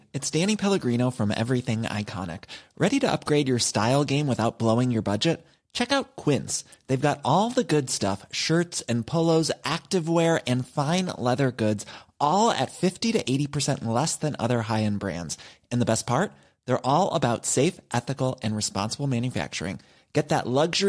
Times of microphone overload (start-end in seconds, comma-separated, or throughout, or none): none